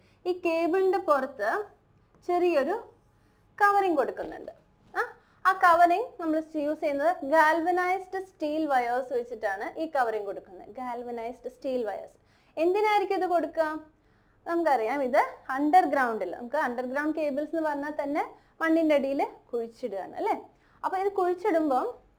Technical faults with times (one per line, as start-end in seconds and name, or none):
0.00-22.18 crude rate conversion